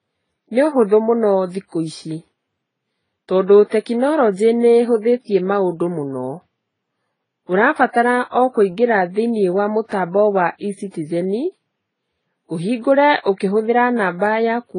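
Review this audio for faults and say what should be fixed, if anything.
Throughout the speech, nothing is heard above 10 kHz, and two kinds of coding artefacts overlap. This is likely transcoding between lossy codecs, which fits AAC followed by Vorbis. To prevent it, encode once from the original uncompressed source.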